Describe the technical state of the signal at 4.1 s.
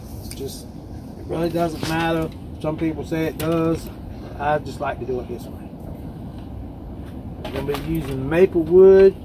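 At 4.1 s the signal is intact, with no dropout, distortion, glitch or other audible fault at that point.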